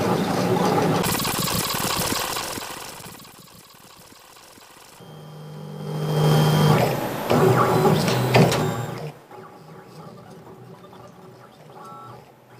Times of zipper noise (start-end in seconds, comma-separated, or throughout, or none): 5.76-6.32